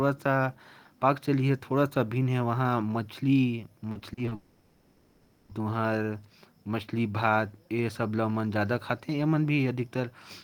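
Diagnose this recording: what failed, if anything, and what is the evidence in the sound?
Repeated packet loss (robotic sound) at the network stage: between 3.91 and 4.33 s, packets went missing again and again, leaving five short gaps of up to 40 ms. The receiver filled each by repeating the preceding sound, so about a third of that stretch is patched and the speech turns choppy and robotic.

From 4.35 to 5.51 s, the speech is replaced by a fading continuation of the last sound, a buzz or hiss lasting about 1.1 s with no silence, after which speech resumes with that portion gone. The likely cause is a long network dropout, with concealment stretching the final received audio across the entire missing span.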